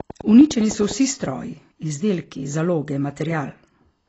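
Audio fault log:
throughout: AAC compression, plainly audible. Nothing reaches above 8 kHz, so the sound is dull and smeared, which fits low-bitrate AAC-LC at around 24 kbps, the likely cause. On a spectrogram, energy stops flat at 8 kHz, with patchy gaps in the upper bands.
0.00–0.92 s: train of clicks, about ten evenly spaced pulses at 9.9 per second, peaking about 5 dB above the surrounding sound and heard as steady ticking. The likely cause is interference or a faulty connection. A waveform shows regular thin spikes, and a spectrogram shows matching vertical lines.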